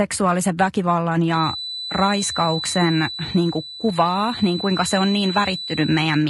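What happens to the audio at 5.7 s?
A thin, steady whistle near 4 kHz sits roughly 10 dB under the voice, swelling and fading slowly in level, from 1.26 s to the end. This is a feedback whistle, likely a loudspeaker-to-microphone loop held right at the edge of feedback. The voice is also rough and grainy, with noise between harmonics and a synthetic-sounding top band, pointing to low-delay AAC compression at a low bitrate around 32 kbps.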